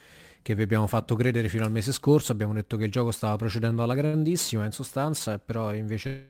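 At 3.19 s, just after "detto che il gioco", and again at 4.06 s, there is a short stall from a late packet. The jitter buffer ran dry, and the last sound was held for about 19 ms and then 72 ms before the speech resumed intact. On a spectrogram the held stretch shows as flat, unchanging horizontal bands, and the waveform shows the same cycle repeating.

From 6.07 s to the end, a call audio freeze holds the final sound for about 222 ms as a fading buzz that never drops to silence. The likely cause is packets delayed in transit. It appears as a smeared, frozen spectral slice with a slowly decaying envelope.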